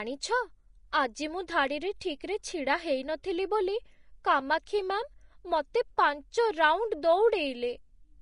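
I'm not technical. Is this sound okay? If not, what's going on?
No. The speech sounds hissy and grainy from start to finish. Nothing is heard above about 10.6 kHz, so the top end is dull. This is likely Vorbis compression: squeezing the file too hard turns fine detail into rough noise.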